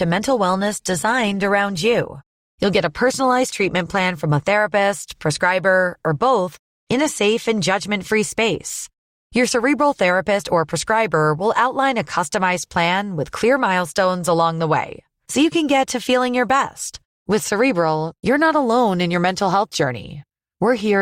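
The player opened the adaptive stream at a low bitrate, then switched up once it had gauged the connection. From 0 to 4.0 s the speech lacks treble and carries heavier codec artefacts, consistent with Opus near 24 kbit/s, before jumping seamlessly to fuller quality near 64 kbit/s.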